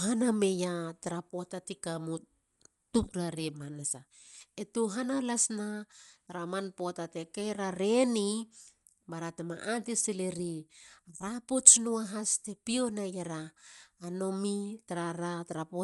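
From start to finish the speech sounds dull and band-limited, with a rough, fluttering noise clinging to voiced tones. A spectrogram shows nothing above 11.5 kHz and grainy, smeared fill. The likely cause is Dolby Digital compression, which fits a low 64 kbps bitrate.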